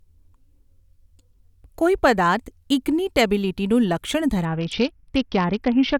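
From 4.45 s to the end, the speech dulls and turns gritty: a Bluetooth SBC bit pool drop. The sound fits the bit pool falling from 31 to 7, near 61 kbps, starving the upper sub-bands. A spectrogram shows blank treble over grainy noise.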